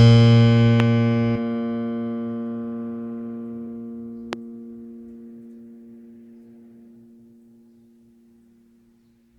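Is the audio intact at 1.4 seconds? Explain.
No, not quite. Right around 1.35 to 1.37 s there's a skip ahead. Roughly 0.7 s of the music got dropped, probably by an overflowing jitter buffer, and playback jumps straight to later audio with no gap, so the phrase lurches forward abruptly.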